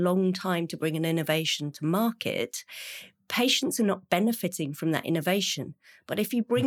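No technical faults are audible.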